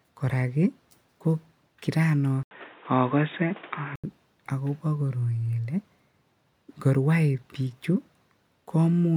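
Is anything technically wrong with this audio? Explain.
Yes. From 2.43 to 4.04 s the input likely switched to a poorer device. After an 80 ms silence the speech turns dull, with a narrower band and a new noise floor.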